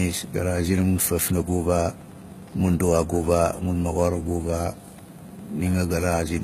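A speech recording carrying Wi-Fi interference throughout: a faint tick repeating every 102.4 ms, roughly 30 dB below the speech, showing as evenly spaced thin vertical lines on a spectrogram and regular spikes on the waveform. The sibilants also sound gritty and metallic, and the spectrogram shows smeared, copied-looking treble and a hard ceiling at 14.9 kHz, likely HE-AAC compression at a bitrate around 20 kbps.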